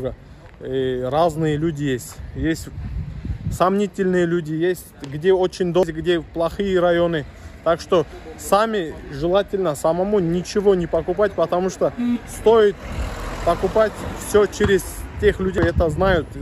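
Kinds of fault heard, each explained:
Damaged data in a compressed stream: two brief glitches, at 5.83 s and 15.58 s, each over almost instantly. Bytes in the coded stream were lost or corrupted at those points, so the decoder misread the frames, lost sync and hunted for the next frame header.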